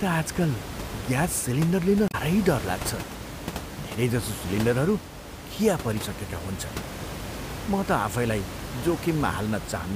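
At 2.08 to 2.15 s, just after "ग्यास सिलिन्डर लिन", there is damaged data in the compressed stream: the decoder misreads the corrupted frames, loses sync and hunts for the next valid header. The speech breaks into a brief 70 ms disturbance, heard over room noise about 10 dB below the speech.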